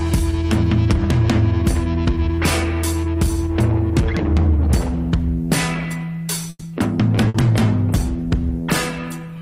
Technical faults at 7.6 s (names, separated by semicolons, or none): call bitrate drop